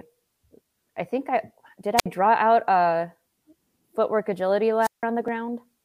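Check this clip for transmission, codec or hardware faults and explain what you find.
Two wireless microphone squelch dropouts interrupt the speech. The first runs from 1.97 to 2.06 s, right after "I think I did", with a mute of about 59 ms; the second runs from 4.81 to 5.03 s, after "footwork agility", muting for about 162 ms. The analogue FM link weakens, hiss swells, and the receiver's squelch shuts the output until the signal recovers. A hiss rise before each hole sets this apart from a clean digital packet-loss gap.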